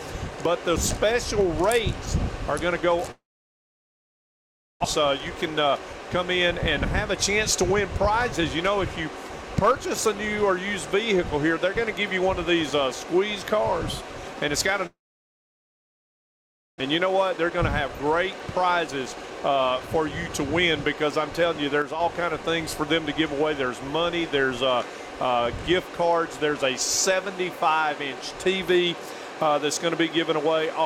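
Packets stopped arriving from 3.11 to 4.86 s, most likely a long network dropout. The receiver briefly extends the last sound as a fading buzz, then about 1.6 s is silent. When the audio resumes it has skipped ahead, with about 1.6 s of material gone for good, and the stream now sits roughly a tenth of a second further behind.

To recover that backlog, a jitter buffer speed-up runs from 4.98 to 5.94 s. The receiver repeatedly cuts out short slices, each one or a few pitch periods long, which totals about 70 ms. Playback runs at 108% speed with the pitch unchanged, so the passage sounds slightly hurried.

The same failure returns from 14.86 to 16.82 s, again likely a long network dropout. A short fading tail gives way to about 1.83 s of silence, and 1.6 s of audio never comes back. The added delay this time is roughly 300 ms.

A longer jitter buffer speed-up follows from 17.06 to 20.85 s. 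Playback again runs at 108% with pitch intact, and roughly 300 ms is trimmed away, so this stretch audibly rushes for nearly four seconds.

From 21.82 to 22.00 s, one channel drops out, likely a lost stereo channel. In the mono sum, sound common to both sides falls abruptly by about 6 dB, and anything carried only in the missing channel vanishes for that moment.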